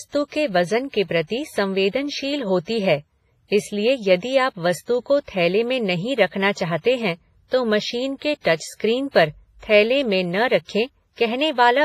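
The speech carries heavy WMA compression damage throughout. The sound is ringing and washy, with a hiss that swells and fades with the signal. This points to a low bitrate, around 24 kbps, and likely to an early WMA encoder. A transform codec of that kind quantises long blocks coarsely, so its noise smears across tens of milliseconds and weak spectral lines drop out entirely.

Three pre-echo events follow. The first runs from 8.41 to 8.45 s, just after "हैं तो मशीन के", and spreads over 44 ms. The second runs from 8.56 to 8.60 s, just before "पर थैले में न", also over 44 ms. The third runs from 9.11 to 9.14 s, just before "पर थैले में न", over 32 ms. In each case a sharp attack sits late in a coding block. The noise budget set by that loud onset fills the quieter stretch ahead of it, so a brief hiss leads the attack and the onset itself sounds softened and smeared.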